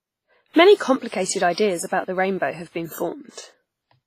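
From start to end, the speech rings and smears, with hiss breathing along. Nothing sits above 15.4 kHz. Likely heavy WMA compression, near 24 kbps.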